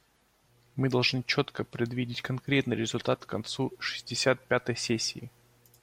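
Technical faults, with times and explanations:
0.46–5.82 s, mains hum: a steady low 60 Hz drone sits well beneath the speech to the end, from a ground loop or nearby transformer coupling the power line in.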